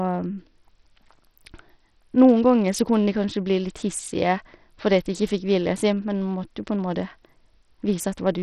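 Bluetooth SBC compression damage runs through the whole clip. The speech is heavily degraded, with nothing above 14.6 kHz, a flickering, unstable top end, and a gritty grain with aliasing riding on the speech. The likely cause is the SBC codec running short of bits, consistent with a rate near 64 kbps. Its crude allocation across a handful of wide sub-bands starves the upper bands and quantises the rest coarsely, with no hearing model to hide the noise.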